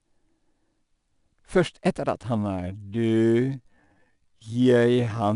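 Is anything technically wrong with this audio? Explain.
Yes, two faults. Throughout, the speech has been through 4-bit ADPCM compression, coding each sample as a small step from a prediction. The coarse steps leave a gritty hiss riding on every loud passage, plainly audible, and nothing reaches above 10.6 kHz, which fits a data rate near 89 kbps.

From 2.36 s to the end comes a time-stretched section, where the audio plays at about half speed (0.508×) while keeping its pitch, likely from software repeating short pieces to lengthen it. The pace abruptly drags.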